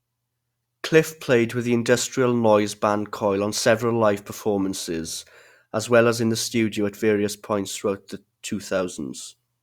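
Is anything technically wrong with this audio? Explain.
No, nothing technically wrong can be heard in this speech recording.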